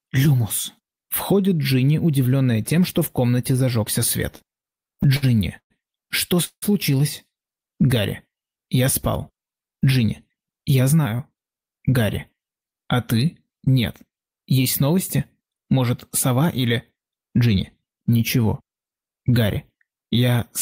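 Between 4.31 and 5.72 s the audio stutters through a run of repeated stalls. There are 11 short gaps, the longest 117 ms, totalling 286 ms and about a fifth of that stretch. Each is the receiver stretching out the last sound while its jitter buffer sits empty. Nothing is actually lost, it just drags. At 6.44 s there's a call audio freeze lasting until 6.64 s, likely from packets held up in transit. The last sound is carried on for 179 ms, including 70 ms that fades into silence, and then playback resumes where it stopped, now 179 ms later than before. From 9.76 to 11.58 s a jitter buffer speed-up kicks in. Playback runs at 110% with pitch unchanged as tiny pitch-period slices are trimmed, around a fifth of a second in all, which makes that section sound rushed.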